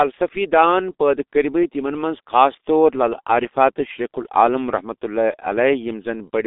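G.723.1 codec damage runs through the whole clip, from the first second to the last. The speech has been squeezed through a low-rate telephony coder that works in 30 ms frames, and the heavy smearing points to roughly 6 kbit/s. Only a narrow line band of about 250 Hz to 3.7 kHz survives, with nothing above 3.8 kHz. The voice therefore sounds muffled and hoarse, and the consonants blur as the coder's slowly updated speech model lags behind rapid changes.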